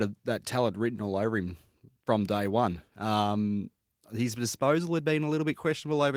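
Nothing goes wrong anywhere in this one; the speech just carries the full-bandwidth sound of Opus voice compression, which fits a rate of around 24 kbps.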